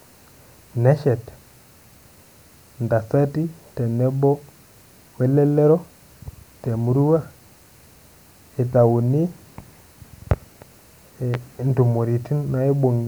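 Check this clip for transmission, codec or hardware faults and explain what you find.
One hardware fault shows up: a single loud pop near the end of the speech. From 11.34 to 11.37 s a sharp thump stands about 10 dB above the speech. The likely cause is a voltage pulse, from a plug, switch, static discharge or driver glitch, entering the signal chain, where later circuits round it into a brief burst. The speech carries on underneath, which separates it from a dropout or buffer glitch, where the sound itself breaks or goes missing.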